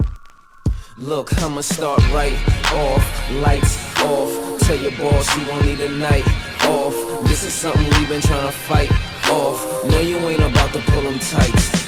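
Faint, regular ticks run from 0.78 s to 11.32 s, roughly one every 0.7 s, about fifteen in all. These clock slip clicks likely come from two unsynchronised devices drifting by around 30 ppm, each tick fitting a single dropped or repeated sample.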